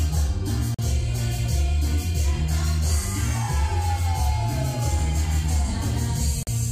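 At 0.74 to 0.79 s and 6.43 to 6.47 s, the sound drops to silence for about 43 ms and 41 ms, then resumes. These are likely Bluetooth stalls.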